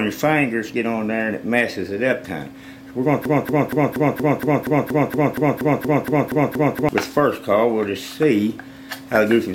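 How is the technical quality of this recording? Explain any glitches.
One clear glitch: a broken-record loop from 3.25 s to 6.89 s. A 236 ms fragment repeats exactly, back to back, 15 times, likely because the playback or stream stalled and resent its last buffer, so the intended audio there is lost. Unlike an echo, each repeat is identical and never fades.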